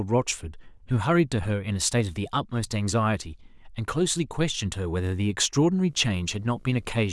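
From 5.76 s to the end, a low, steady buzz with a fizzy hash above it sits well under the speech, roughly 35 dB down. This is video or display buzz: a screen or video cable coupling into the audio path, buzzing at the 60 Hz picture field rate.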